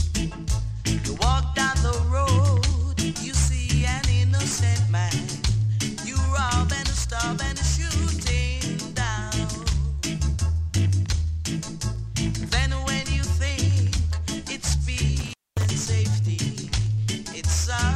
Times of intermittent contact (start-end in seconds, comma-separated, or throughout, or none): 15.19-15.71